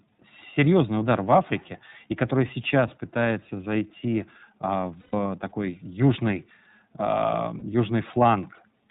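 The whole clip runs through the iLBC codec: speech is band-limited below 4 kHz and sounds plainly rough and synthetic, which fits its 30 ms, 13.33 kbps mode. At 5.0 to 5.14 s, between "сейчас пытается зайти а" and "такой южный", lost iLBC frames get filled with a repeated, noisy pitch cycle, a held buzzy vowel. A shorter one follows at 7.59 to 7.62 s, and the speech recovers almost at once both times.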